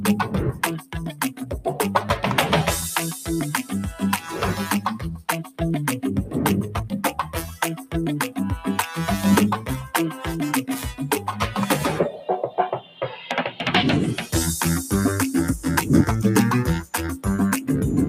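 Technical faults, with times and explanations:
Throughout: noise suppressor applied to music or sounds. A speech-tuned suppressor treats sustained parts as noise; level swings around 10 dB, showing as a ragged, pumping envelope on the waveform.
0.52–1.53 s, 4.87–5.61 s, 7.16–7.35 s, 7.76–7.94 s, 12.13–12.28 s, 12.77–13.02 s: sound cut by the noise suppressor. Sustained content sinks by up to about 15 dB, showing as faded, thinned patches on the spectrogram.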